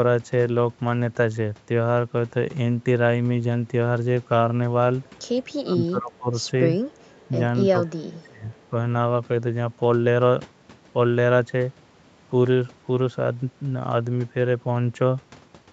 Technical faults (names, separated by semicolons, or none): speech suppressed in double talk; echo leak